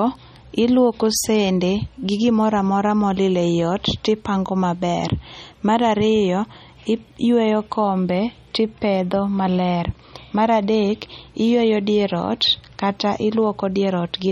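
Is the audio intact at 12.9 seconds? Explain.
No. At 12.9 seconds the speech carries MP3 compression artefacts that run through the whole clip, likely from an encoder starved of bits, which fits a bitrate around 32 kbps. It drops weak frequency lines frame by frame and cuts everything above 16.2 kHz, leaving plainly audible watery, swirly smearing.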